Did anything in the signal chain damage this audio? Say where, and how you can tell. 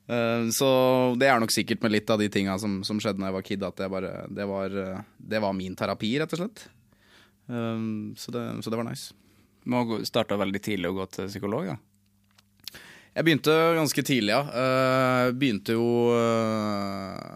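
No, nothing in the chain from capture through to playback leaves an audible mark on this speech at any stage.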